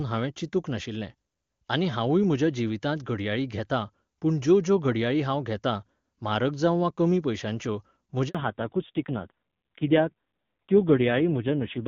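At 8.29 s, just after "वा कमी पयश्यांच्यो", a handover gap occurs: no speech frames arrive during the network switch, leaving a 60 ms silence. From 8.35 s onward, a fallback to narrowband moves the call from clear HD Voice to a low-rate narrowband codec, so everything above 4 kHz vanishes and the speech sounds duller and rougher.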